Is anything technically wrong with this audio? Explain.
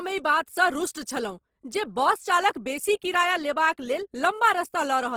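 Yes. Throughout, likely Opus compression, in its CELT mode at a low rate (around 16 kbps), fills starved bands with folded or noise-like content, making the speech plainly grainy and rough while still reaching 20.2 kHz.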